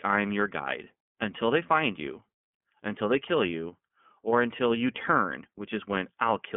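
Throughout, the speech carries iLBC codec damage. Nothing passes above 3.6 kHz. Each frame is coded alone, likely 30 ms frames, leaving plainly rough, synthetic speech.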